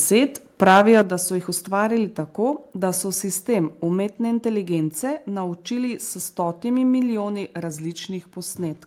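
From 0.62 to 1.02 s there is microphone overload. The peaks crackle and sound harsh and flattened. The input level was likely set too high, so the loudest parts drove the converter about 5 dB past its limit. Their tops were sliced off, and around seven percent of the samples in this stretch were cut off at the converter's limit. That clipping is what adds the gritty edge.

At 1.02 s the microphone volume is stepped down. The whole level drops by about 6 dB in one jump, background included. It comes right before "da so jih" and just after the distorted peaks. This is likely the call software reacting to the overload. It saw clipping and cut the device's input gain in a single step rather than fading it.

From 7.70 to 8.48 s a drift correction step occurs. The audio slows by about 5.4 percent and drops about 95 cents in pitch, close to a full semitone. Speed and pitch move together. This is likely clock-matching software changing the playback rate to refill its buffer. 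The result is a brief, noticeable sag and detuning in the sound.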